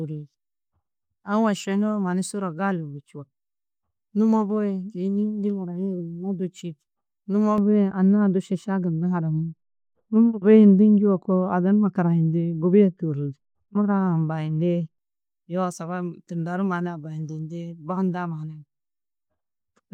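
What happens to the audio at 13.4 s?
De-emphasis applied wrongly, from 7.58 to 14.98 s: a treble cut meant to undo pre-emphasis slopes highs down about 11 dB at 10 kHz, muffling speech until "yoo saga tunda du".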